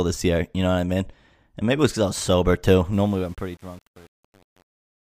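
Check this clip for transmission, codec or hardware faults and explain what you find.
One fault is present: truncation distortion on a fade. From 2.93 s, after "I was sober too", the fade-out to 5.13 s is requantised without dither, which fits an 8-bit path. Beyond 3.05 s the fading speech turns gritty as the level falls to the last few steps.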